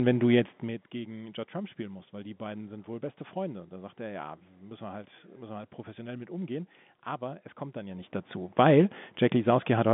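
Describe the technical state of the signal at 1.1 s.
At 1.1 s the speech is intact, with no fault present, and it carries the usual narrow telephone band of G.711 coding with nothing above about 3.8 kHz.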